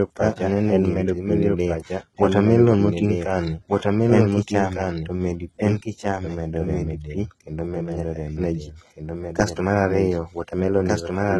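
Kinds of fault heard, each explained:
Doubled audio track: The speech is heard twice, with a second full-band copy trailing the first by about one and a half seconds. The copy sits roughly 5 dB below the original. It carries no reverb tail or room colour, so it sounds like a plain duplicate rather than an echo. It runs for the whole clip. The likely cause is the signal being captured again through a slower path, or an edit holding two copies out of step.
HE-AAC compression: The treble here is rebuilt rather than kept. The codec coded only the lower spectrum and copied those bands upward, shaping them with a coarse envelope. The harmonics of the rebuilt highs do not line up with the lower range, so s sounds turn gritty and lispy. The damage is heavy and present throughout, with nothing above 11.8 kHz. This likely comes from HE-AAC v2 at a low rate, fitting about 16 kbps.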